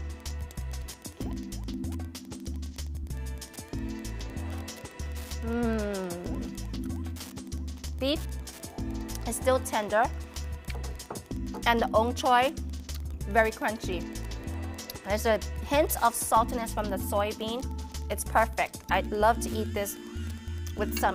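Wi-Fi interference runs throughout the clip: a steady ticking repeating every 102.4 ms, roughly ten times a second, sitting about 25 dB below the sound. A nearby Wi-Fi radio's beacon transmissions are being picked up and rectified by the audio circuitry, turning each beacon into an audible tick.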